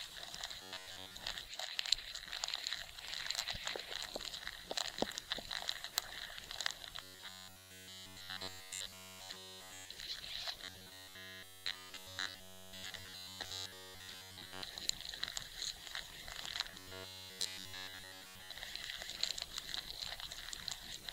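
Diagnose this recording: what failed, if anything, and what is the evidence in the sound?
A rigid, metallic buzz at 93.8 Hz overlays the sound from 0.62 to 1.16 s, 7.02 to 9.92 s, 10.64 to 14.63 s and 16.71 to 18.56 s. It follows the rough shape of the sound but loses its natural texture, almost entirely in the three later stretches. This is robotic sound from repeated short buffers, likely a driver or buffer underrun. Audio arrived too seldom, so a fragment of about 10.7 ms was replayed in place of the missing sound, imposing that fixed pitch.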